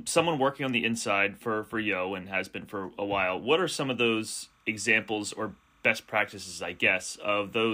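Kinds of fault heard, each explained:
timecode bleed: A faint, steady chirping warble sits behind the speech from about 4.24 s to the end, roughly 40 dB down, flipping between pitches near 1 and 2 kHz. Linear timecode, apparently 29.97 frames per second, is leaking in from an adjacent track or cable.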